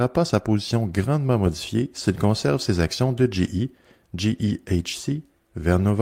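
No technical faults are audible.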